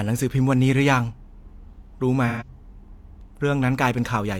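From 2.27 to 2.48 s, AAC frame loss with concealment: roughly three lost frames were patched from the last good spectrum, leaving a brief smeared, noisy, phasey stretch in the speech.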